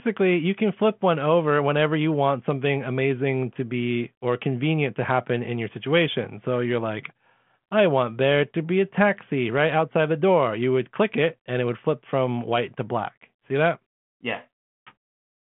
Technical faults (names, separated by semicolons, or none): none